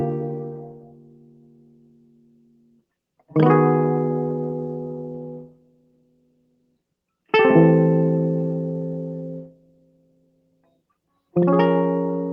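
A noise suppressor built for speech has been left running on this music, and it pumps the whole way through. It treats sustained tones, room ambience and reverb tails as noise to be removed, so the level keeps swinging by something like 20 dB. Attacks mostly punch through, then the held part of each sound sinks away behind them. The result is a fluttery, thinned-out texture rather than a steady mix.

The clearest damage comes where the suppressor cuts sound outright. From 0.33 to 2.85 s, about three seconds of sustained material gets pulled down, bottoming out about 17 dB under where it should sit. It happens again from 5.45 to 6.93 s and from 9.46 to 10.85 s, each roughly a second and a half, and once more briefly at 11.06 to 11.35 s. In every case the held or fading sound sinks in level or has its decay chopped short, while the onsets mostly survive.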